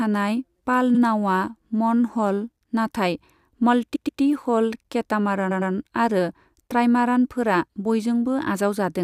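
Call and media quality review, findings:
Repeated frames, stutter at 0.94 s, 3.95 s and 5.50 s. 64 ms block replayed once. 128 ms block replayed twice. 107 ms block replayed twice. Probable encoder or packet path re-sending compressed frames. Adds about 0.53 s of length in total.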